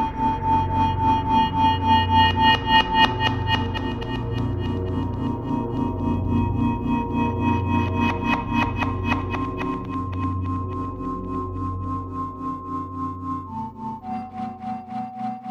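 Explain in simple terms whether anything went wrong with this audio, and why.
Nothing went wrong here.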